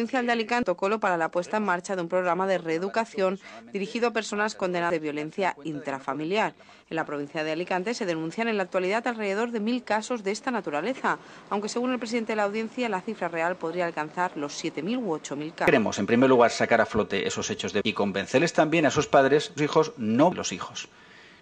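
Whole compressed frames were skipped at 0.63, 4.90, 15.68, 17.81, 19.58 and 20.32 s. Missing or rejected frames make the decoder jump about 0.7 s ahead each time, consistent with roughly 93 ms frames.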